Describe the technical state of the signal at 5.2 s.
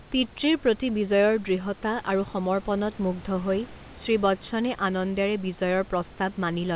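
At 5.2 s the speech signal is intact, carried cleanly over the call path with its band ending at 4 kHz and room noise sitting about 25 dB below the speech.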